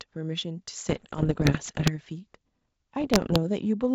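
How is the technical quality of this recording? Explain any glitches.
The recording has two stretches of damage from bit errors on an ADPCM link, at 0.89 to 1.91 s and again at 3.00 to 3.38 s, over wideband telephone coding that sounds like full-rate G.722. Flipped bits corrupt the decoder's step size and predictor, so each error smears over several milliseconds as pops and rough bursts with brief jumps in level. The first stretch is denser, with an error rate of a few percent, while the later one is lighter, nearer one percent.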